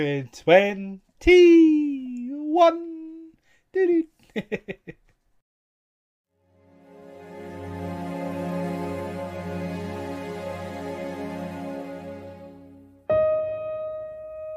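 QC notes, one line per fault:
No faults to note.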